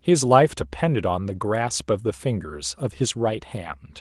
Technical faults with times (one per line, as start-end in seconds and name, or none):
none